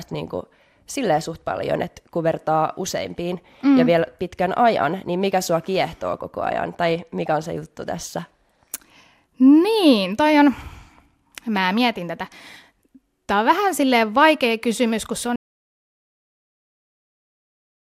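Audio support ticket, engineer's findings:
Audio dropout to silence, 15.36 s through end of clip. Speech cuts off mid-flow to silence, room tone gone too. Likely input loss (device disconnect, link failure or mute) with recorder still writing silence.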